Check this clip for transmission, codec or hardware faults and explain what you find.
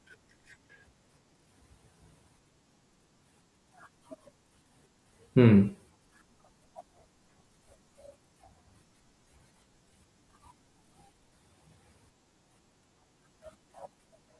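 No faults can be heard in this speech recording. Nothing in the sound points to a problem anywhere along the chain that carried it.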